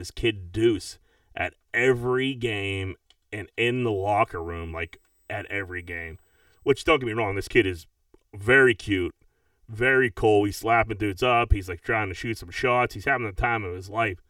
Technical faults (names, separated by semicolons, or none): channel delay (comb filtering)